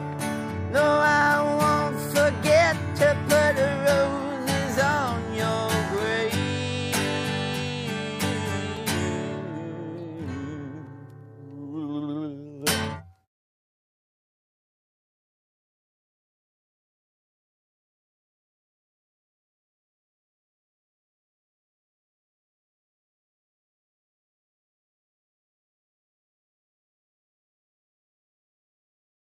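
At 8.77 s the sound drops out for about 3.5 ms. This is a block of digital silence. A run of samples was replaced by zeros, probably because the output buffer was not filled in time. The signal cuts to nothing and back with no fade. At 10.87 s the same thing happens for 2.9 ms, which fits a 128-sample block. Both gaps are too short to hear as holes. Each one comes across as a tick or dip.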